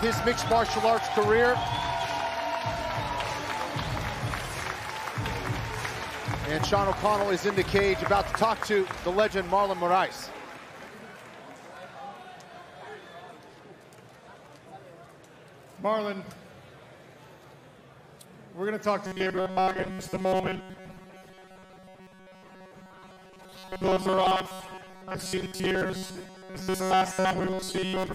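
From 19.07 s to the end, the sound turns into a rigid, metallic buzz at 188 Hz: robotic sound from repeated short buffers. The likely cause is audio arriving too seldom, so a slice of about 5.3 ms is looped, replacing most of the real signal.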